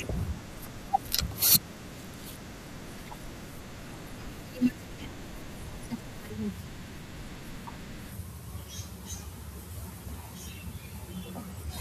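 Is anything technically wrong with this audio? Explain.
No, nothing technically wrong turns up anywhere in this speech recording, so there's nothing here to flag.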